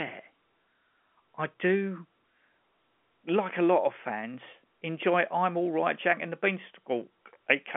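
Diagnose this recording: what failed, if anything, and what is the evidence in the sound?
No fault found.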